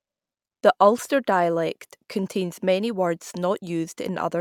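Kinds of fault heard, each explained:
Nothing stood out on listening to this speech recording.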